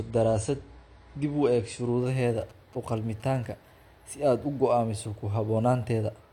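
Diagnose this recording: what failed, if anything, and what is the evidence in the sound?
Playback stage, network side: an adaptive stream starting at a low bitrate. From 0.0 to 2.0 s nothing sounds above 9.8 kHz and codec artefacts are stronger. Then the treble returns abruptly with no gap, which fits a step from a low AAC rate to about 96 kbit/s. A dropout or buffer glitch would leave a hole.

Analogue wiring: GSM signalling bursts from a nearby phone, rectified by the audio circuit. Between 2.41 and 3.46 s there is a galloping dit-dit-dit of short buzzes at 217 Hz, roughly 25 dB below the speech. Mains hum would be steady and at 50 or 60 Hz.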